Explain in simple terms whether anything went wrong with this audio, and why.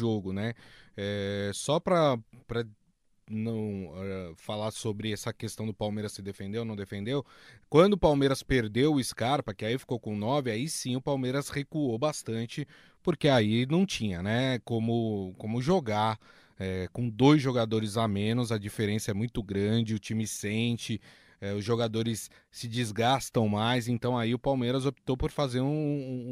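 Nothing went wrong here.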